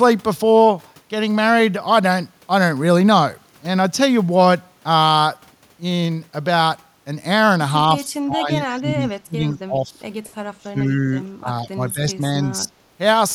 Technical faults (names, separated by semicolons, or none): speech suppressed in double talk